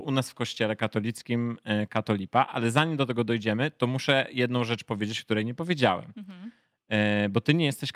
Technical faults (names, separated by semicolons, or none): none